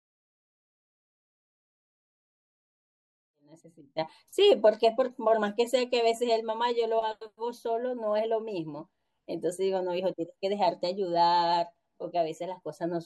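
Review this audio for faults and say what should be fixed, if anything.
Nothing here needs fixing; the speech just eases in with a gentle fade from around 3.5 s up to 4.18 s, which is exactly how an editor would bring it in.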